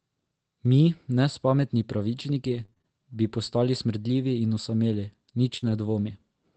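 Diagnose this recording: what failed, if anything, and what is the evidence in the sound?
Network, repeated packet loss (robotic sound): from 2.49 to 2.85 s, five gaps up to 28 ms are patched with repeated sound, appearing as stuttering, smeared harmonic blocks on a spectrogram.

Network, burst of packet loss: at 5.57 to 5.64 s, about 50 ms of the last sound is held and faded, then speech resumes with 40 ms missing. The waveform shows a decaying envelope, then a jump.

Network, lost packets rebuilt from error correction: from 5.62 to 5.72 s, low-bitrate copies stand in for three packets, so 60 ms sounds rougher and noisier. The spectrogram shows grainier texture but no gap.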